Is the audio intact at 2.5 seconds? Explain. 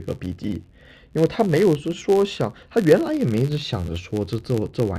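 No. At 2.5 s, as throughout, a filter restarted on every block resets each block, giving a buzz near 93.8 Hz (fitting a 512-sample buffer). Unlike steady hum, it tracks the speech level.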